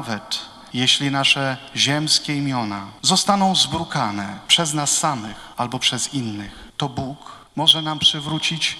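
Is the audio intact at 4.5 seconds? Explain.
No, not quite. Right at about 4.53 s there's a brief burst of hard clipping, over in roughly a hundredth of a second. The signal peaks there run about 2 dB past what the stage can pass, so their tops get sliced flat. Those squared-off peaks throw extra harmonics high into the spectrum, and with an overload that small and that short you hear it as a quick crackle or tick on the peak rather than sustained fuzz.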